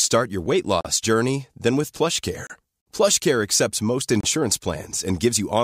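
At 0.81 to 0.85 s, 2.47 to 2.50 s and 4.21 to 4.24 s the speech drops to silence for about 40, 30 and 30 ms, then carries on. These gaps are most likely a Bluetooth stall, where interference delayed packets until the headphones' buffer emptied. Each is a short, hard dropout. On a waveform it is a flat line with abrupt edges. On a spectrogram it is a thin, fully blank vertical stripe across all frequencies.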